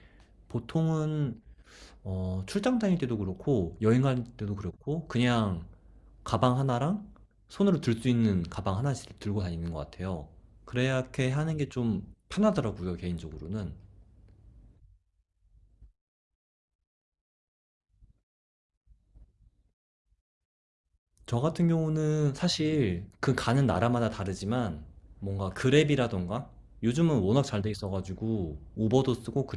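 No technical faults are audible anywhere in the speech recording.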